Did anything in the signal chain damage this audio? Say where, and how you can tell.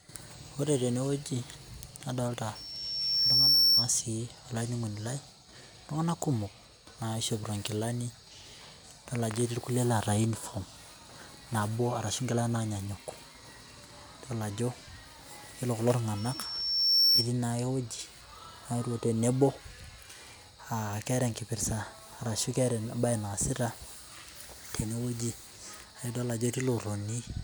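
Yes. A loudspeaker feedback squeal appears twice in this speech, from 2.55 to 3.92 s and again from 16.17 to 17.30 s: a single piercing tone at 5.4 kHz swells over roughly a second until it sits about 10 dB above the speech. The damage happens in the acoustic and analogue path, where the microphone picks up the loudspeaker it feeds. At 5.4 kHz that loop's gain exceeds one, so the tone keeps reinforcing itself.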